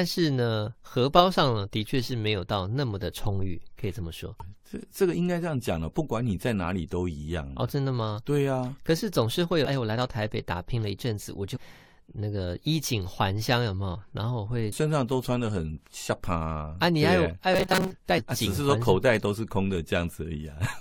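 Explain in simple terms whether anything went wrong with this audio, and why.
Five brief glitches come from damaged data in a compressed stream, at 4.40 s, 9.65 to 9.67 s, 11.55 to 11.57 s, 14.71 s and 18.17 to 18.19 s. Part of the stored speech was corrupted. The player lost its place. Each one is a quick chirp or blip.

From 17.54 to 17.92 s there is robotic sound from repeated short buffers. The speech becomes a stiff, metallic buzz near 188 Hz. Most of that stretch is repeated sound. The likely cause is audio arriving too slowly, so the player looped a slice about 5 ms long.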